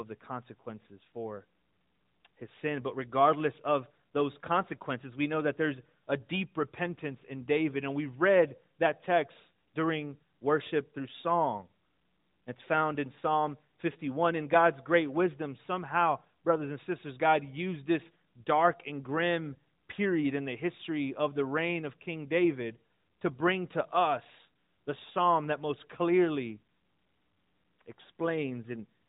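No technical faults are present in the speech, which comes through an AMR narrowband mobile codec at 12.2 kbps that leaves light coding damage and passes nothing above about 3.8 kHz.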